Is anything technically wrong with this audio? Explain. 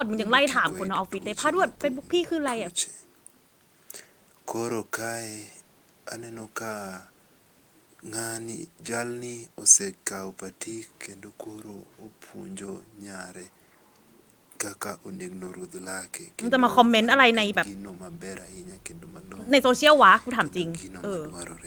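No, there's nothing technically wrong here that I can hear anywhere in this speech recording.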